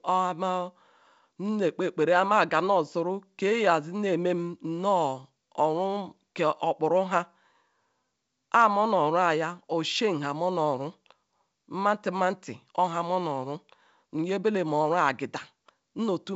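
Nothing goes wrong in this speech clip; it comes through G.722 wideband telephone coding at 64 kbit/s, so the sound simply tops out around 7.7 kHz, which is just how that path is meant to behave.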